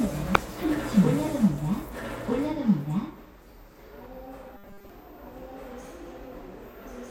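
From start to finish, the audio is most likely being captured twice, through a second, slower path or by an edit that leaves two copies out of step. A full-band duplicate trails the original by about a second and a half, at roughly the same loudness. Every event is heard twice, and the echo is dry, with no decay or added room tone, so it reads as a second track rather than a reflection.

At 0.35 s, a compressed frame arrives with flipped bits and the decoder plays it anyway. Misread codes and wrong gains scatter energy into frequencies where it doesn't belong, across what sounds like a few consecutive frames. The result is a short, harsh blip of noise that peaks around -5 dBFS.

From 4.57 to 4.90 s, new audio likely arrives too seldom, so the playback software loops the last fragment it holds instead of the real signal. The buzz sits at 200 Hz, which points to repeated chunks of about 5 ms, and most of the actual audio in that span is skipped. 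This robotic sound from repeated short buffers is a rigid, metallic drone that only loosely follows the shape of the original sound.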